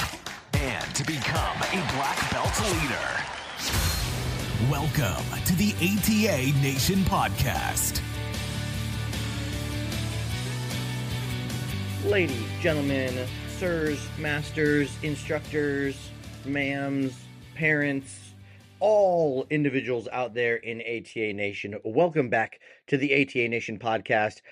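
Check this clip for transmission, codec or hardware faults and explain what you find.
No transmission, hardware or codec-related faults can be heard anywhere in the recording, so the signal arrives in a sound technical state.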